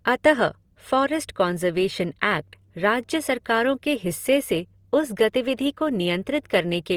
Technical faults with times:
0.00-6.97 Opus compression

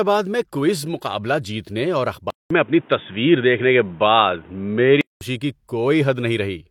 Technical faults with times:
2.30-5.21 input switched to a poorer device

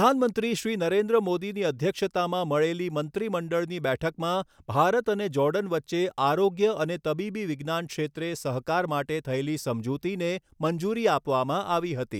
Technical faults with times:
none

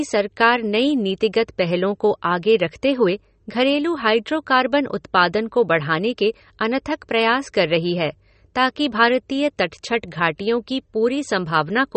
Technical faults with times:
0.00-11.96 MP3 compression

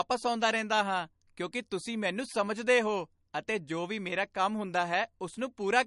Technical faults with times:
0.00-5.87 MP3 compression

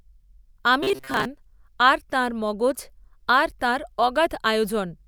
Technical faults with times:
0.83-1.25 robotic sound from repeated short buffers

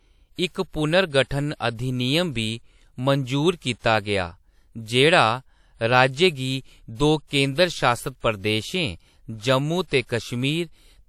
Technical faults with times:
7.27-7.31 pre-echo

